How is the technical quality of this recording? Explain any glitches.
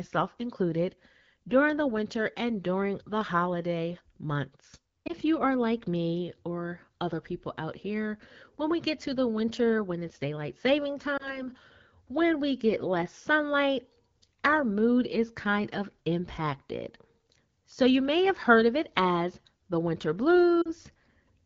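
The recording is clear wideband speech with three short dropouts caused by lost AMR speech frames. The upper band has the crisp, slightly hissy top end typical of AMR-WB, consistent with a rate around 12.65 kbit/s.

Lost AMR speech frames occur at 5.07–5.12 s (after "during the holiday months", before "you are like me"), at 11.17–11.47 s (after "when it's daylight saving"), and at 20.62–20.70 s (after "it as the winter"). The first two are single 20 ms frames and the last spans two, about 40 ms. Radio errors corrupted these frames, so the decoder discarded them and filled the gap by repeating the previous pitch and vocal tract settings at reduced gain. The single-frame losses are heard as a brief dip or warble in the voice, and the two-frame run drops to near silence.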